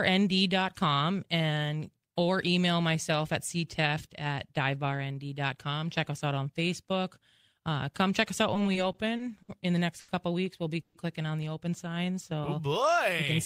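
From 8.54 to 9.49 s the speech shows repeated stalls, a stutter. The packets kept coming late, so the jitter buffer emptied six times in under a second. Each time, the receiver carried the last sound forward until new audio arrived. Together these fills add about 150 ms, roughly 16 percent of the span. The longest is 60 ms. Nothing is lost. The speech just drags and stutters.

At 10.00 s comes a short stall from a late packet. It lasts until 10.09 s. One packet was not ready on time, and the buffer ran dry. The receiver stretched the current sound by 80 ms, then resumed at the exact point it left. No audio is skipped. A single sound is simply held too long. Everything after it now runs 80 ms later.

From 10.81 to 10.95 s there is a brief call audio freeze. The sound does not stop. It hangs for 130 ms as a held sound that never drops to silence. Then the speech picks up where it paused, so a gap is inserted and nothing is missing. 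The likely cause is packets held up in transit, leaving the jitter buffer empty. The delay grows by another 130 ms.

From 11.85 to 13.14 s a jitter buffer slow-down sets in. The buffer was running low or had just raised its target delay. To build up a reserve, the receiver repeated tiny pitch cycles and bits of pauses many times over. This adds 111 ms. The speech plays at about 92 percent speed. Pitch stays the same. Sounds are drawn out and the pacing feels sluggish.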